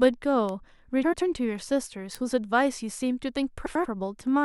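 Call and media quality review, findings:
Bit error spike at 0.49 s. Single sharp tick, broadband, unrelated to the speech around it. Probable component: memory or digital link. A flipped bit jumps a sample value by a power of two, then it snaps back. The tick's brevity fits about three corrupted samples.

Bit error spike at 2.15 s. Same symptom, one isolated tick across the spectrum. Same probable component and mechanism. Again about three samples long. No lost time, no level change.

Frames out of order, 1.03 to 1.22 s. Garbled flutter. Probable component: packetiser or jitter buffer. Two adjacent blocks of about 93 ms each played swapped, which fits runs of four frames. Duration preserved.

Frames out of order, 3.66 to 3.86 s. Same flutter. Same mechanism: neighbouring blocks of about 93 ms decoded in exchanged order.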